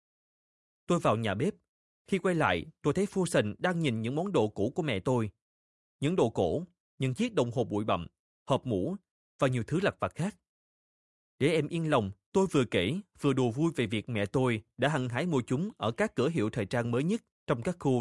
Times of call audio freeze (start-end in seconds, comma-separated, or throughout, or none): none